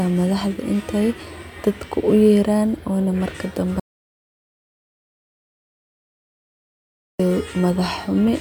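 At 3.80 s the speech cuts off abruptly in an audio dropout to silence lasting 3.4 s, until 7.19 s. The input was likely lost while recording continued, writing silence: a flat waveform line and an empty spectrogram band, without room tone.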